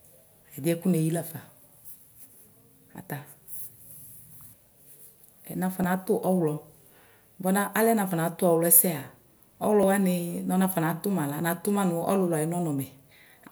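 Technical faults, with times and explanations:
5.84 s and 9.83 s, audio missing between chunks: two brief skips 4 s apart, each losing a few milliseconds of speech with the two sides joined directly. The regular spacing suggests a recorder likely dropping a sliver whenever it switches between 4-second blocks.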